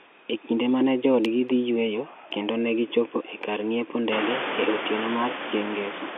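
No technical faults can be heard in this speech recording.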